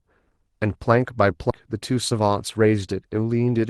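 A speech clip in which, at 1.50 s, the talker seems to lurch forward: there is no pause or filler, just an abrupt join where roughly a fifth of a second of speech has vanished. This is a skip ahead. The receiver discarded a stretch of audio, either lost in transit or dropped when its jitter buffer overflowed, and played the later audio that was already queued, so the two sides of the gap meet almost seamlessly and the delay shrinks by about the same amount. Shortly after, from 1.66 s to 2.93 s, the speech runs about 7% fast while keeping its pitch, giving a slightly hurried, rushed delivery. This is a jitter buffer speed-up. Holding more audio than its target, the buffer trimmed many tiny pitch-period-sized slices in succession, removing about a tenth of a second in total to bring latency back down. Both happen on a call-codec path whose bandlimited, coded character points to Opus at a modest rate, with content up to about 12 kHz.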